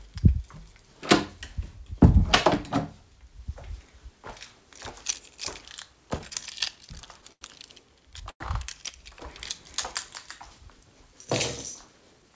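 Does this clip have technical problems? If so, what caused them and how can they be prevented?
Yes. From 6.06 to 7.43 s there are repeated stalls (stutter). The sound catches eleven times, each gap up to 89 ms. Data reached the receiver later or slower than it was played out, so its jitter buffer kept running dry. Each time, the receiver stretched the last sound to cover the wait. About 191 ms was filled this way, roughly 14% of that span. Nothing is lost, but the sound drags and stumbles. A larger or more adaptive jitter buffer on a steadier network would prevent this.

At 8.29 s comes a call audio freeze lasting to 8.42 s. The sound holds for 110 ms. It fades to near silence for about 80 ms before resuming where it left off. Nothing is missing. A 110 ms gap has been inserted instead. The likely cause is a sudden jump in network delay that emptied the buffer. Prioritising call traffic and avoiding congested links would prevent it. 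The audio is band-limited at 8 kHz, which fits a wideband call codec.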